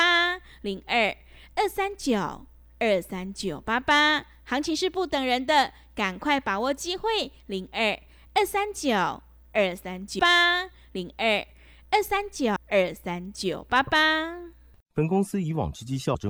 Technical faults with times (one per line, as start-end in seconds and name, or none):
10.19 compressed frames skipped
12.56 compressed frames skipped
16.14 compressed frames skipped